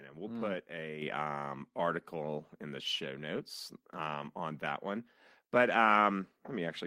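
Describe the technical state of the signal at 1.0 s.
At about 1.02 s the call software judged the microphone too quiet and raised its input volume in a single step, a microphone volume stepped up of about 6 dB. Right after "and we'll mm put", speech and background noise jump louder together and stay there.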